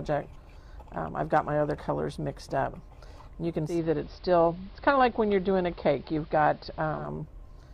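At 3.64 s a hybrid receiver loses its digital stream and crossfades over about 171 ms to the station's AM broadcast, returning at 7.11 s. This is digital radio blending to analogue: hiss rises to roughly 35 dB below the signal, and level holds steady.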